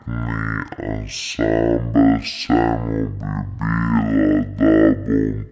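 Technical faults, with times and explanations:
Throughout: wrong sample rate. The speech runs at half speed and a full octave low, consistent with 32 kHz audio played back at 16 kHz.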